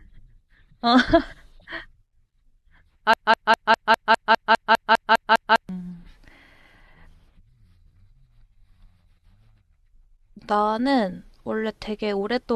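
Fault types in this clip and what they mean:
Broken-record loop: A 0.2-second fragment of the speech repeats exactly, back to back, about 13 times from 3.14 to 5.69 s. The speech that should fill that span never plays. This is likely a player or stream stalling and resending its last buffered piece.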